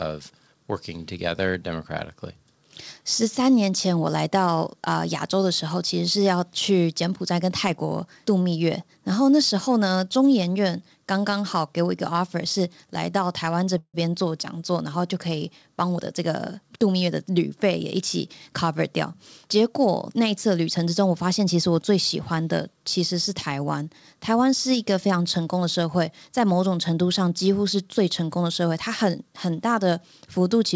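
At 13.78 s there's a call audio freeze that runs to about 13.96 s. The sound doesn't just stop: the last bit gets stretched into a buzzy, hissy tail that fades down to silence, with roughly 60 ms of silence in there. That's likely the jitter buffer running dry while packets were held up in transit. When they turned up, playback picked up right where it left off, so nothing's lost, but everything after is about 157 ms later than before.

From 15.83 s to 17.39 s you get a jitter buffer speed-up. The receiver had more audio queued than it wants, probably that backlog from the freeze arriving in a bunch, so it kept snipping out tiny pitch-period-sized chunks to catch up. In total it dropped about a fifth of a second, and the speech runs at around 111% speed. The pitch stays the same, but it comes across as hurried. Throughout, the call path's band limit shows too, with nothing above 8 kHz, which fits a wideband codec like G.722.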